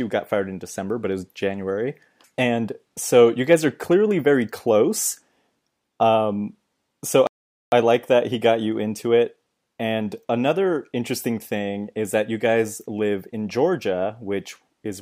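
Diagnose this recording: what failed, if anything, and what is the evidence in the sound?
At 7.27 s the speech drops to dead silence, then picks up at 7.72 s exactly where it left off, with nothing skipped. This is a rebuffering stall at the playback stage: the player drained its downloaded audio and waited for more, adding about 0.45 s.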